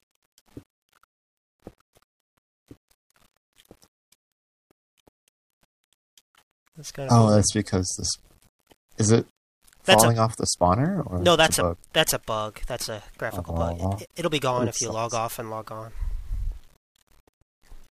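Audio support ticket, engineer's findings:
Low bit depth without dither, full length. Grainy distortion tracking the signal, worst on quiet passages, which get gritty and sputter near silence. Error sits about 40 dB under the signal. Likely a rounding stage down to around 9 bits with no dither applied.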